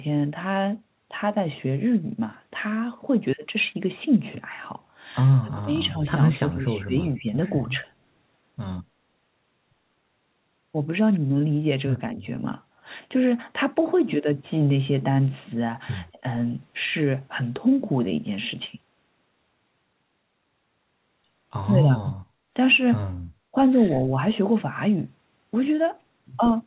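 Around 5.44 to 5.94 s and 6.32 to 7.25 s the speech dips by up to about 20 dB, with smaller dips at 12.15 to 12.24 s and 16.12 to 16.26 s. That's likely speech suppressed in double talk, with the canceller ducking the talker while the far side spoke. At 22.05 to 22.14 s there's a quiet echo leak, a copy about 180 ms late and roughly 10 dB down, likely from the far-end loudspeaker. Right after, from 22.26 to 22.53 s, the background is gated by the echo canceller and the room tone drops by about 8 dB. One last brief double-talk dip lands at 23.52 s.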